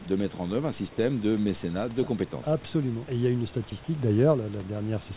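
At 3.7 s the sender's voice detector likely judged a stretch of sound to be background and stopped sending, so sound was dropped by the voice detector. About 10 ms of speech is lost, and a brief 20 ms patch of steady comfort noise plays in its place before the speech returns. It sits within narrowband audio that has nothing above 4 kHz, with room noise about 24 dB below the speech.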